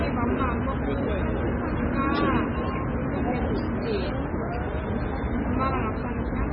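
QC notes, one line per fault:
Throughout, MP3 compression: nothing remains above 5.3 kHz, and the sound turns watery and swirling as faint detail flickers in and out. This is likely a starved MP3 encoder, fitting roughly 16 kbps, cutting treble and zeroing weak frequency lines frame by frame.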